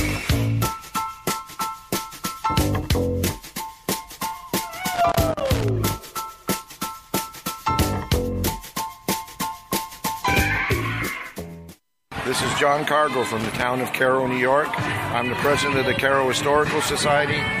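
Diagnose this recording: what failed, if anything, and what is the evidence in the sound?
Loose connector crackle in the analogue wiring: irregular scratchy bursts at 4.94–5.69 s and 13.40–13.63 s from a contact making and breaking, unlike evenly spaced buffer clicks.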